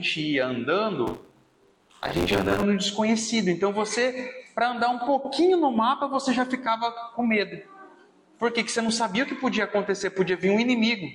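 The writing program and the hardware reading the ring buffer have drifted out of step, causing buffer tearing from 1.07 to 2.63 s. Roughly two-fifths of each period repeats audio about 40 ms old, hard-joined on both sides, giving a robotic 93.8 Hz buzz that fits a 512-sample buffer.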